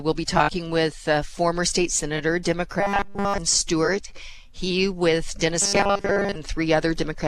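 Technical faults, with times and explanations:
2.80–3.39 s, robotic sound from repeated short buffers: the sound becomes a rigid, metallic 200 Hz buzz throughout, likely because new audio arrived too seldom and a 5 ms chunk was looped in its place.
5.62–6.36 s, robotic sound from repeated short buffers: the same 200 Hz buzz covers most of this stretch, with some real sound breaking through, likely from a 5 ms chunk repeated while incoming audio was skipped.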